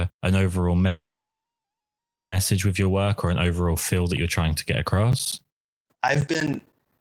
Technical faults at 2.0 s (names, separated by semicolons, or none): call audio freeze